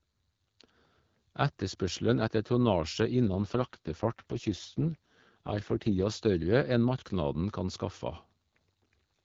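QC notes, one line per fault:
3.26 to 6.13 s, AMR rate drop: the speech suddenly turns rougher and more synthetic with a raspy edge, while the band stays just as wide and nothing drops out. It sounds like the HD Voice link falling from around 12.65 to around 6.6 kbit/s to spend bits on error protection, then recovering.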